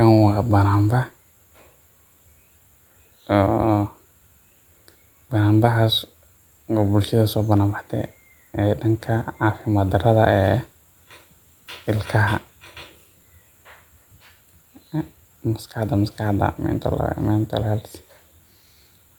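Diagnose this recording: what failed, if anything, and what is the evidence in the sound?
No failure is audible anywhere in this speech recording.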